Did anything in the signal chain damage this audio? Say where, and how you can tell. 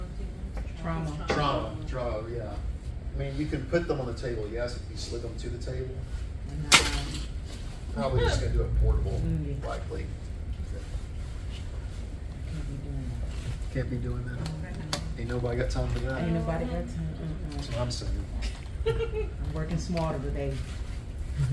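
Yes. From 6.5 s to the end, a 20 Hz ticking buzz rides on the signal. The resampler restarted on every 50 ms block, likely in a 48 kHz to 24 kHz conversion, and each edge lacks its neighbours. A spectrogram shows thin vertical lines every 50 ms.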